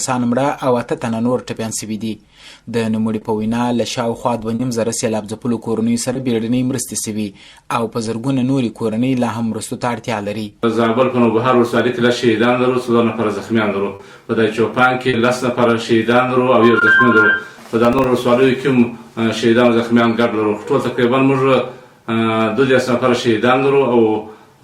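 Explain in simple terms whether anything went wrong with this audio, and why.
Two things went wrong.

First, short concealed packet loss. Small pieces of the audio stream arrived too late to be played, seven times: at 3.19, 4.55, 6.13, 10.49, 13.95, 15.09 and 16.79 seconds. The pieces at 4.55, 13.95 and 15.09 were about 40 milliseconds long, and the others about 20. Each time, the receiver covered the hole by stretching out whatever it had just played, then slid back into the real signal. Each gap sounds like a quick smear or tiny wobble.

Second, processor overload crackle. From 17.85 to 18.04 seconds, the device was too busy to prepare its very small chunks of audio on time. The chunks were a few milliseconds each, and it missed around five of them. Each time it fell behind, it replayed an old scrap of audio with abrupt edges, so that stretch comes out as a short burst of gritty crackling that stops as soon as the device catches up.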